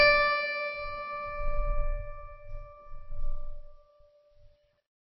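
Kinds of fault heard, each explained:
MP3 compression: The encoder was likely starved of bits, which fits a very low bitrate around 24 kbps. With so little data it discarded the whole treble range and kept only what its hearing model ranked highest. In this music nothing remains above about 5.8 kHz, so the top end sounds dull and closed in. Throughout the clip, weak frequency components flicker between frames, giving the sound a plainly audible watery, swirling texture and blurring sharp attacks.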